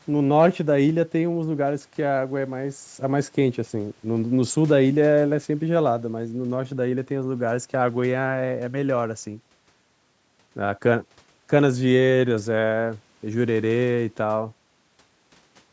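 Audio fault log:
No faults are heard anywhere in the speech. The call microphone processing behaves as intended, with the lowest bass trimmed away and nothing above 8 kHz.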